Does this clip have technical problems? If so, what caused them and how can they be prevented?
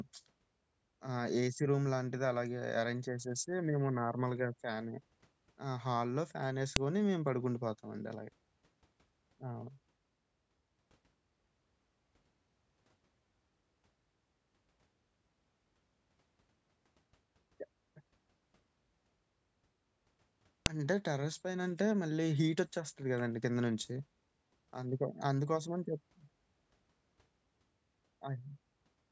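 Yes. Sharp, loud clicks snap out of the speech at 6.76 s and 20.66 s. Each is a file header played as audio: a joined or streamed WAV piece kept its header bytes, which were then played back as samples. Strip headers before joining or streaming WAV data.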